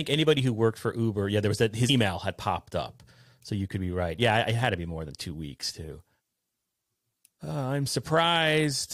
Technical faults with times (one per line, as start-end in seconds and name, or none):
1.88 compressed frames skipped